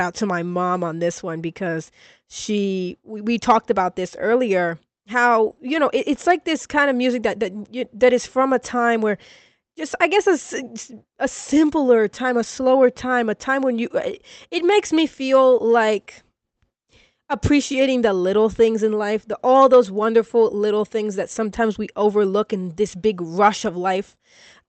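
Nothing technically wrong can be heard in this speech recording. It went through a WebRTC call path, and the top of the spectrum stops at about 8 kHz, which fits an Opus codec running at around 32 kbps.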